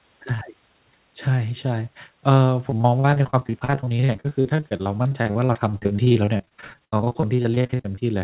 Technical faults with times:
2.70-8.02 repeated packet loss (robotic sound)

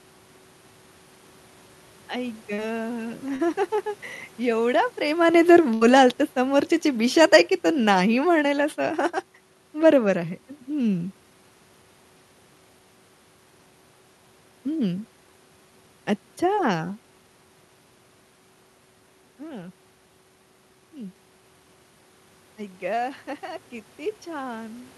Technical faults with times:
2.53-2.59 short concealed packet loss
3.36-3.40 short concealed packet loss
5.26-8.63 automatic gain falling
5.74-5.82 burst of packet loss
16.55-16.58 short concealed packet loss

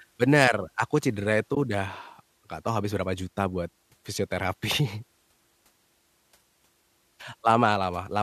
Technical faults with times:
1.54-1.57 AAC frame loss with muting

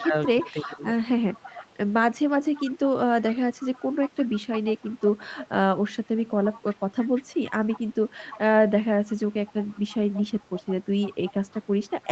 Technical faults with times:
0.00-0.79 echo leak
0.06-0.85 speech suppressed in double talk
1.32-1.72 echo leak
2.54-5.48 echo leak
6.17-8.39 echo leak
9.06-12.11 echo leak

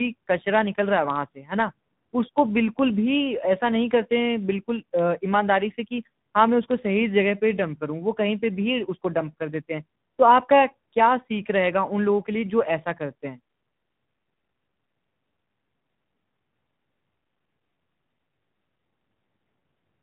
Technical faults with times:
0.00-20.02 tandem speech coding

